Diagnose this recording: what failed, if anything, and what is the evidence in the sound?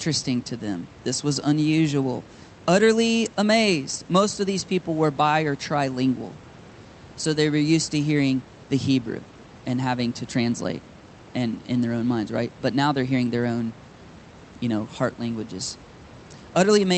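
Nothing stood out on listening to this speech recording; the faint room noise sits well below the talker, and the call path's band limit is audible only as the expected dullness at the top end.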